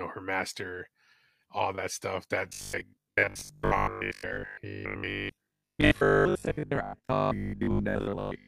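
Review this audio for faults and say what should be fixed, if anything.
From 2.49 s to 8.47 s, right after "all that stuff", the speech collapses into robotic sound from repeated short buffers: a stiff, metallic buzz pinned at 50 Hz that only loosely tracks the words. The likely cause is new audio arriving too slowly, so playback keeps looping the last chunk, which fits a 20 ms buffer given that buzz, and for most of that stretch the real audio gets skipped. To prevent it, give the stream more buffering headroom or fix the delivery stall so the player never runs dry.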